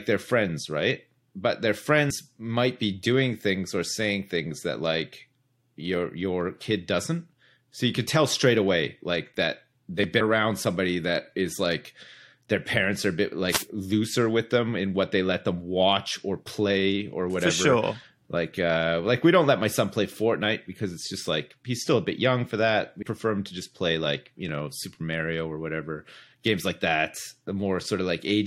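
At 2.09 s the speech jumps forward with a soft, smeared blip. These are compressed frames skipped: roughly five frames of 23.2 ms each, about 100 ms of audio, never reach the output, and the decoder's overlapping frames blur the join. A spectrogram shows a narrow vertical seam where harmonic tracks shift abruptly without a bright broadband line. The waveform continues at a different point in its cycle, with no gap.

At 10.04 s the speech jumps ahead, and a sliver of sound is missing. It is most likely a dropped buffer from an overrun: the recording software fell behind, and about 10 ms of samples were overwritten before being read, so the two sides were spliced directly. The waveform shows an abrupt discontinuity with no silent gap. The spectrogram shows a thin, full-height vertical line.

From 13.46 to 13.68 s a short swish of static rises over the speech. This wireless microphone noise hit comes from the FM radio link briefly fading as reflected signals cancelled, which let receiver hiss climb. 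On a spectrogram it is a roughly 0.2 s patch of broadband noise spread across the upper frequencies. The waveform shows a fuzzy, noise-thickened stretch.

At 23.01 s a second compressed frames skipped event produces the same smeared jump. This time roughly four 23.2 ms frames are lost, again around 100 ms of audio, leaving another soft seam in the spectrogram.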